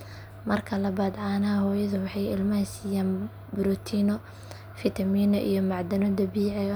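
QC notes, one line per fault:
No technical faults were found in this speech recording.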